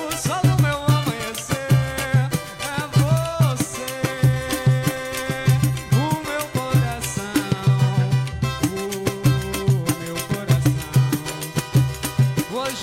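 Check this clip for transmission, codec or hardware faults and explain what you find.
Nothing in the clip points to any fault.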